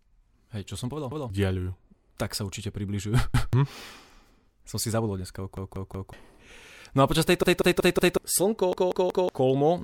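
Repeated buffer stutters occur at 1.12 s after "som povedal", 3.34 s, 5.57 s, 7.43 s after "a počas", and 8.73 s. New audio arrived late, so the last 0.19 s piece replayed with hard joins. It repeats once at first, then three or four times, and up to roughly 0.7 s of sound is lost.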